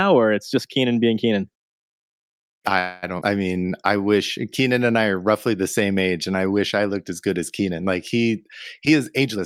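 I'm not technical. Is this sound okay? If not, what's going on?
No, it isn't. There are four separate problems, all typical of audio sent over an internet call.

From 2.79 to 3.05 s there is a call audio freeze. For about a quarter of a second (231 ms) the speech stops moving forward, and the last sound is stretched into a fading buzz or hiss. The likely cause is that packets were held up on the way and the receiver ran out of audio to play. When they arrive, the speech picks up exactly where it left off, so nothing is lost, but everything after it now runs about 231 ms later.

Right after that, at 3.21 to 3.23 s, there is a skip ahead. A small piece of speech, a bit under a tenth of a second, is simply missing. The two sides are joined almost directly, with only a tiny 7 ms patch between them, so you hear an abrupt jump rather than a pause. Dropping that piece also wins back part of the delay the freeze added.

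From 3.54 to 3.98 s there is a jitter buffer slow-down. The receiver was short on stored audio, so it repeated tiny slices of the sound many times over to build up a reserve. This stretches that stretch by 46 ms, so it plays at 92% speed. The pitch stays the same, but the speech sounds slightly drawn out and may waver a little.

Near the end, from 8.90 to 9.39 s, there is a jitter buffer speed-up, the reverse of the slow-down. The receiver had more audio stored than it wanted, so it cut out many tiny slices, around a tenth of a second in total. That passage plays at 120% speed. The pitch doesn't change, but the talking sounds noticeably hurried for that half second.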